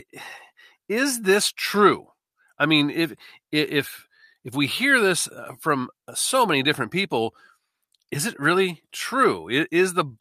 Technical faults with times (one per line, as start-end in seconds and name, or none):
none